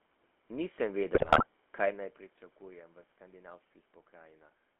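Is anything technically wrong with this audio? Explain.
Yes. Throughout, the GSM full-rate codec leaves a buzzy, gravelly roughness and a narrow 250 to 3400 Hz band, which fits 13 kbps coding. Unlike plain band-limiting, the coarse pulse excitation itself sounds rasping.

From 1.14 to 1.47 s, just before "kaj naj pričakujem v", GSM bit errors corrupt decoded filter, pitch and gain values, producing squawks, pops and gargling. A level change near 2.0 s is only the talker moving, not a burst.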